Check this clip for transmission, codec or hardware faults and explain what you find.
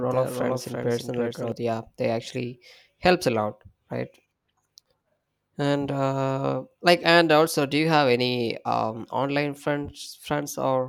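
There's one fault here, a doubled audio track running from the very start until it cuts off abruptly at 1.52 s. A second full-band copy trails about a third of a second behind, a few dB quieter and completely dry, likely because a slower capture path mixed it in again.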